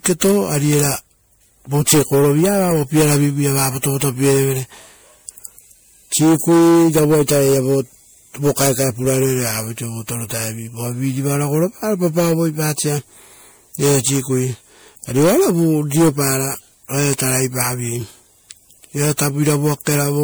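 Repeated lossy re-encoding, likely around five passes through MP3 at roughly 96 kbit/s, gives this speech recording generation loss throughout: swirly, hollow, smeared tone and softened consonant attacks.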